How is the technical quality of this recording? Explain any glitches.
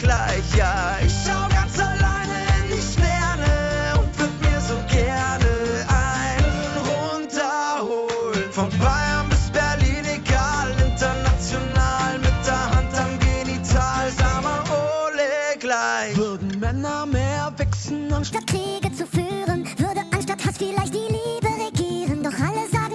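There is one fault, in the final stretch. From 18.32 s to the end, a wrong sample rate plays the audio 1.5 times too fast. Pitch rises about seven semitones, so the sound becomes high and hurried. That fits 16 kHz material played at 24 kHz.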